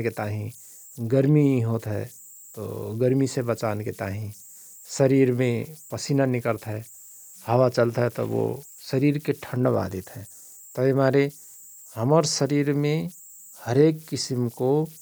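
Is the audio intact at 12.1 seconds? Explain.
No. At 12.1 seconds, as throughout the clip, a whistle sits around 7 kHz, with grainy noise under the quieter speech, about 26 dB below the signal. These are converter idle tones: an undithered delta-sigma converter falls into repeating bit patterns on small inputs.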